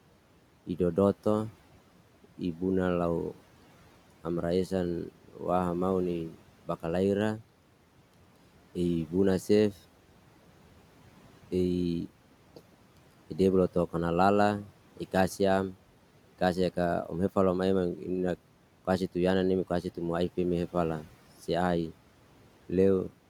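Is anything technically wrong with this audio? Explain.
Yes. There is speech cut by the noise suppressor from 5.12 to 5.41 s. The suppressor mistook some of the speech for background noise and pulled it down by up to about 12 dB. Roughly 150 ms of that stretch sounds swallowed and faint. The room noise, about 21 dB below the speech, is part of the recording rather than a fault.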